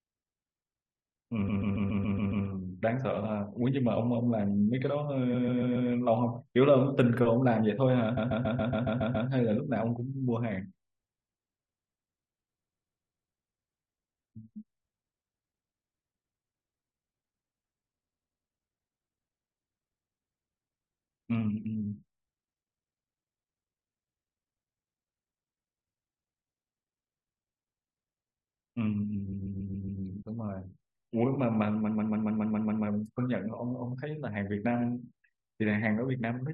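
The speech stutters five times with repeated frames: 1.48 to 2.45 s, 5.33 to 5.89 s, 8.16 to 9.28 s, 29.32 to 30.01 s, and 31.87 to 32.85 s. Each time, the same 139 ms slice plays over and over, four to eight extra times. That length fits a run of about six compressed frames being written or sent again. The decoder simply replays them. Each burst adds up to 1.1 s.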